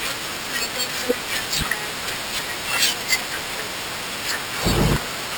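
Throughout, imaging from sample-and-hold upsampling: unfiltered repeated samples, pointing to 12 kHz source audio, mirror the spectrum as metallic fizz about 8 dB down, 6–12 kHz.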